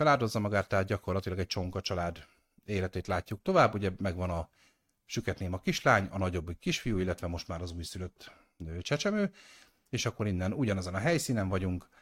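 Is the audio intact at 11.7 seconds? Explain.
Yes, at 11.7 seconds the speech carries on with no dropout, click, distortion or other fault to be heard.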